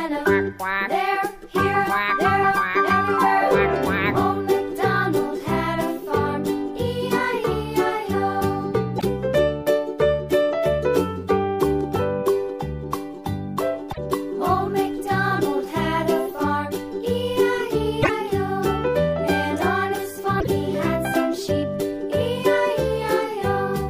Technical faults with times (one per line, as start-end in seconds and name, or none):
8.97-9.04 broken MP3 bit reservoir
13.91-13.98 broken MP3 bit reservoir
18.01-18.09 broken MP3 bit reservoir
20.39-20.47 broken MP3 bit reservoir